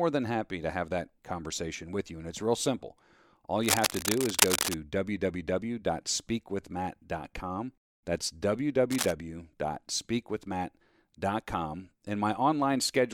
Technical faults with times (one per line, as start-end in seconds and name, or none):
3.61-4.77 cable scratch noise
8.91-9.12 cable scratch noise